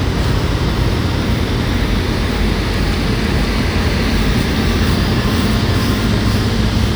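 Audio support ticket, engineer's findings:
Every sound event repeats about half a second later, echo about as loud as the original, clean and full-band with no decay or room colour, present throughout. Doubled audio track, likely a second capture path or misaligned edit mixing in a delayed copy.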